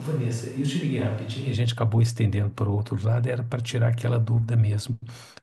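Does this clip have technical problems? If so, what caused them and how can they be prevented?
Yes. From the very start until 1.54 s the speech sounds roomy and hollow, thinner in the bass and roughly 5 dB quieter, with room noise sitting only about 25 dB below it. Then it snaps back to a close, full sound. This points to a switch to a distant microphone: the close microphone's feed likely dropped out or was left unselected, so a mic farther away, picking up more room and less direct sound, carried those opening moments. To prevent it, monitor and record the close microphone on its own track from before the first word, so a dropout can be caught or replaced.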